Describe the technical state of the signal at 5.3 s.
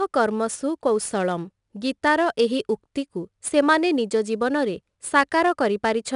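At 5.3 s the speech carries 4-bit ADPCM compression, present across the whole clip. Each sample is coded as a coarse 4-bit step from a prediction, so a level-following gritty hiss rides on the louder speech. Nothing sits above 10.6 kHz, which fits a stream of about 89 kbps.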